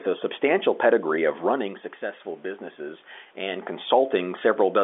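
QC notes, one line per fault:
No faults to log in these QC notes.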